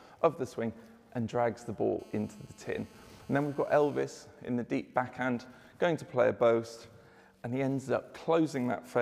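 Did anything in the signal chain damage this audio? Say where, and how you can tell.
Yes. GSM phone buzz gets in at the analogue wiring from 2.0 to 4.03 s. A hard, raspy 217 Hz buzz with many harmonics sits about 31 dB below the signal. It stays steady, which fits an active call. The circuit rectifies the phone's radio bursts into audio.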